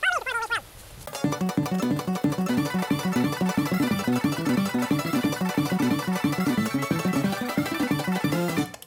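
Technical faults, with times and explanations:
Throughout, wrong sample rate: everything runs three times too fast, and the pitch rises by 19 semitones, an octave and a fifth, so the sound is squeaky, compressed and hurried. Speed and pitch shift together because the samples are read out at a faster clock than the one that captured them, with no resampling in between. The threefold ratio fits material recorded at 16 kHz being played back at 48 kHz.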